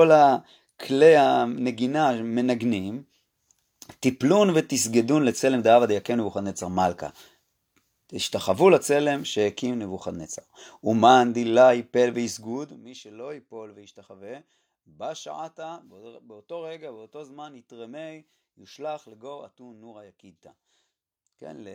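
No technical faults are audible anywhere in the speech.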